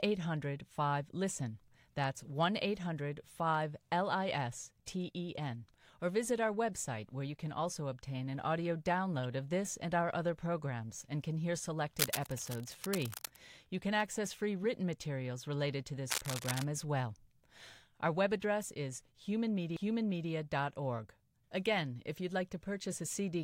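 A rough, crackling rustle rides over the speech from 11.97 to 13.38 s, and again from 16.08 to 16.63 s, only slightly quieter than the voice. This cable scratch noise likely comes from a worn cable or connector being moved, its contact flickering erratically.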